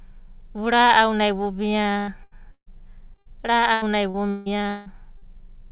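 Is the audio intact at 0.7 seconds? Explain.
Yes, the speech at 0.7 seconds is intact, with no dropout, click or distortion, only the narrow telephone-band sound of the call path, with nothing above about 4 kHz, consistent with G.711 mu-law coding.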